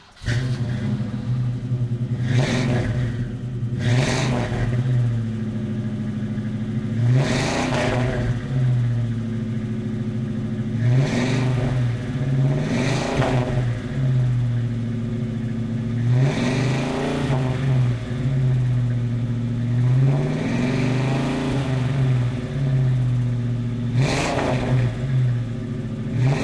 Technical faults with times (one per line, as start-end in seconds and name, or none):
none